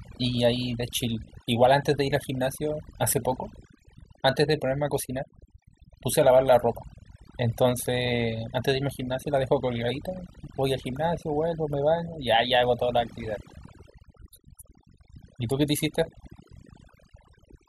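Throughout, overdone noise removal pulls noisy bands to near silence, leaving twinkling specks, unlike a gate's whole-signal cut-offs.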